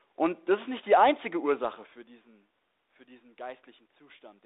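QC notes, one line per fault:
No faults found.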